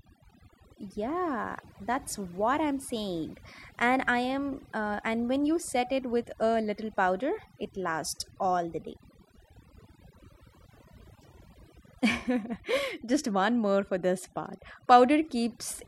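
Throughout the speech, overdone noise removal pulls bands near the noise estimate down hard, leaving a lowered background with twinkling specks.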